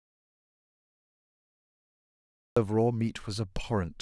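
The input signal was likely lost, through a disconnected device, failed link or stray mute, and the recorder kept writing silence. From the very start until 2.57 s there is silence, with no room tone, before the speech cuts in mid-flow.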